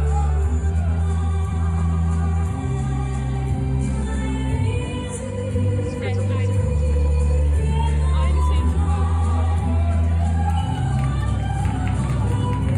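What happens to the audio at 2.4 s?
Nothing goes wrong at 2.4 s; the audio runs through that moment intact, with no dropout, click, distortion or other fault.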